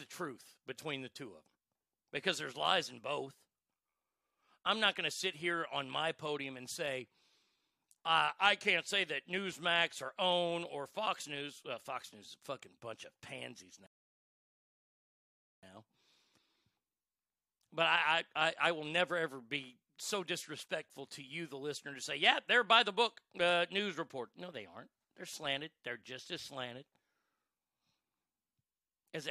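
At 13.86 s, right after "fucking bunch of pansies", a rebuffering stall drops the speech to silence until 15.63 s, adding 1.76 s before resuming exactly where it stopped.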